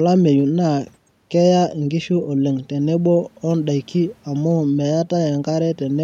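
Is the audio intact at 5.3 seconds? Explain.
Yes, the audio is intact at 5.3 seconds, with no audible fault at that moment.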